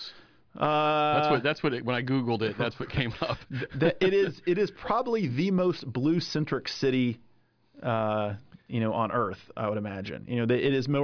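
No technical faults occur in this speech recording, so there is nothing to describe in time order.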